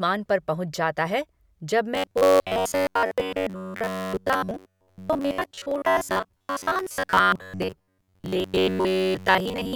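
A speech recording turns robotic from 1.95 s, just after "पहुंच जाता है जब", and stays that way to the end. The fault is robotic sound from repeated short buffers. The voice becomes a rigid, metallic buzz at about 94 Hz. It still loosely tracks the phrasing. The likely cause is audio arriving too late, so playback loops a tiny slice again and again. That buzz fits a slice of roughly 10.7 ms. Much of the real sound, roughly two thirds or more, is skipped.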